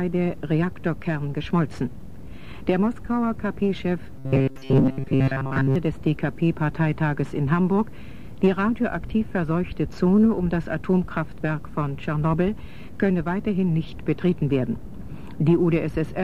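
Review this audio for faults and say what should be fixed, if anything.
From 4.18 to 5.76 s, new audio likely arrived too seldom, so playback kept looping a short buffer instead of the real signal for most of that stretch. The loop imposes a steady 134 Hz buzz, which fits a buffer of about 7.5 ms, and produces robotic sound from repeated short buffers: a rigid, metallic buzz. Keeping the incoming stream safely ahead of playback, for example with a larger jitter buffer, would prevent it.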